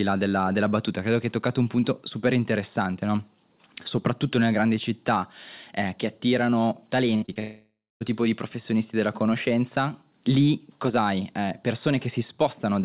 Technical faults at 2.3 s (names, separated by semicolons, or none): none